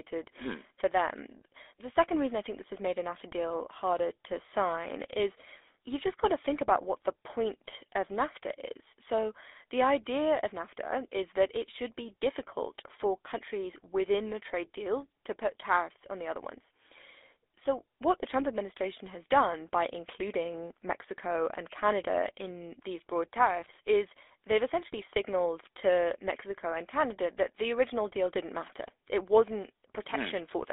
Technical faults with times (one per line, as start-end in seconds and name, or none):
0.00-30.72 GSM full-rate codec
7.64-7.73 GSM bit errors